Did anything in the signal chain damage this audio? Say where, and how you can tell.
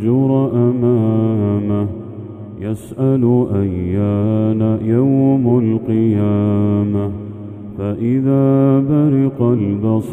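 No, nothing in the signal chain damaged this audio, so there is no stage to point to.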